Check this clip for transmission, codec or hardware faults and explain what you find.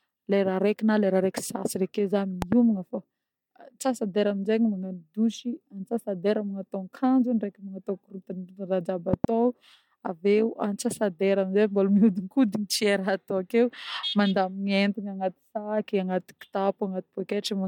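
Two loud pops in this speech clip, from 2.42 to 2.55 s and from 9.13 to 9.27 s. A sudden voltage step, likely from a plug, switch or static discharge, enters the chain; each event lands as a double pop about 15 dB above the speech, which continues underneath.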